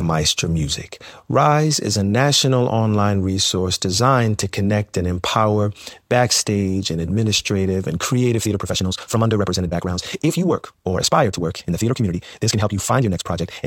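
Speech, with a time-stretched section running from 8.31 s to the end. The pace jumps to about 1.84 times normal while pitch holds steady, so delivery turns rushed, likely from software squeezing the audio to fit a length by dropping short segments.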